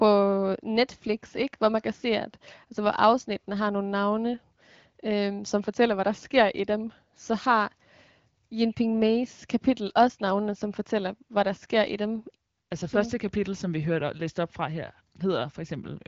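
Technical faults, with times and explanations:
Nothing here counts as a fault; the speech comes through the AMR wideband (HD Voice) codec at about 15.85 kbit/s with only light coding damage, and the empty band above roughly 7.3 kHz is just that codec's normal ceiling.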